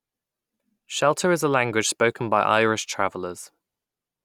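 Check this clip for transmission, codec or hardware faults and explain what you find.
Nothing stood out on listening to this speech clip that would point to a transmission, codec or hardware problem.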